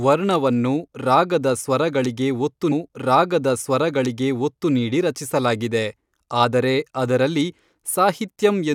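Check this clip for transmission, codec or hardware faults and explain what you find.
One transmission fault stands out: a stream segment repeated.

From 2.71 s to 4.71 s, just after "ವರ್ಣವನ್ನು ರಾಗದ ಸ್ವರಗಳಿಗೆ ಒತ್ತು" and before "ನೀಡಿ ರಚಿಸಲಾಗಿದೆ ಆದರೆ ಅದರಲ್ಲಿ", the speech jumps back and replays a stretch it has already delivered, with a small blip at the join. The playback path fetched or queued the same chunk of the stream twice, so the listener hears that section a second time and the clip runs 2.01 s longer than the material itself.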